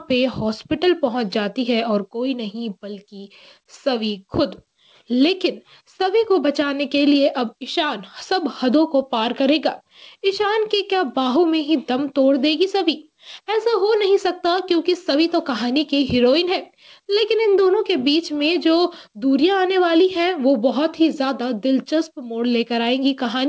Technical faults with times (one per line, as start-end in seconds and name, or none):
none